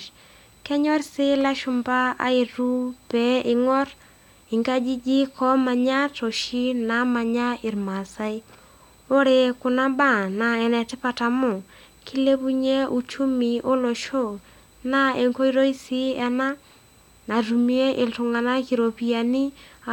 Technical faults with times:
0.00-19.93 USB whine

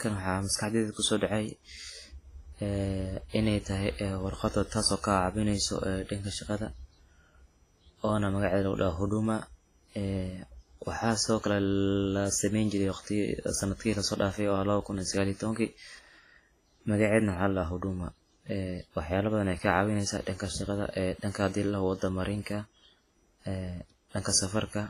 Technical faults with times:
0.00-24.89 WMA compression
24.23-24.25 pre-echo

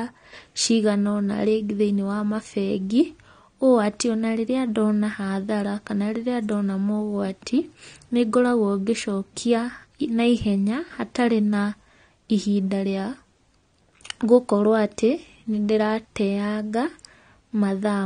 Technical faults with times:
0.00-18.06 AAC compression

